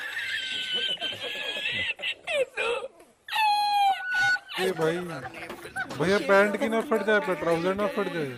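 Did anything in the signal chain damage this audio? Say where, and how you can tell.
Yes. From 3.87 to 4.39 s, a loudspeaker feedback squeal at 1.5 kHz swells over roughly 0.4 s to about 5 dB above the program. The microphone picked up its own loudspeaker in the analogue acoustic path. Unlike a steady interfering tone, it grows out of nothing.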